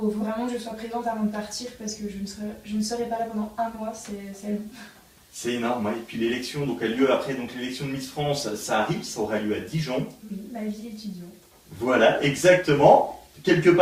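Nothing in the audio stood out as a technical problem on listening.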